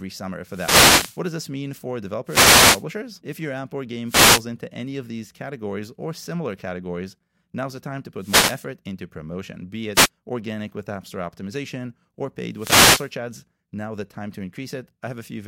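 Six wireless microphone noise hits interrupt the speech, at 0.45–1.24 s (just before "does this mean for"), 2.25–2.85 s (right after it), 4.06–4.45 s, 8.17–8.63 s (between "now's the time to" and "into promotion be"), 9.94–10.09 s and 12.54–13.12 s. Each is the analogue FM radio link fading as reflected paths cancel, letting receiver hiss rise as a brief swish of static. On a spectrogram each shows as a broadband noise wash across the full frequency range. The waveform shows a dense, fuzzy thickening.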